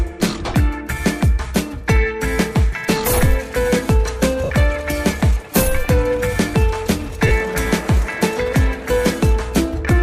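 At 4.44 to 4.50 s, and again at 7.27 to 7.31 s, the audio shows lost LE Audio frames. Stretches of about 60 ms and 40 ms of Bluetooth LE Audio never reached the decoder. The first gap fits roughly six 10 ms LC3 frames, the second about four. The LC3 decoder filled each gap by repeating the last good spectrum with randomised signs, so any tonal content smears into a brief, hissy blur before the signal resumes.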